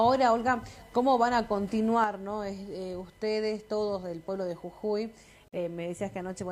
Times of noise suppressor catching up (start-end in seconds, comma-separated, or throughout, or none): none